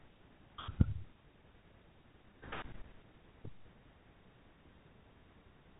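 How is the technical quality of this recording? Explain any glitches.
No glitches turn up here at all; the speech carries the narrow telephone-band sound of G.711 coding, with nothing above 3.8 kHz, which is just how that format sounds rather than anything going wrong.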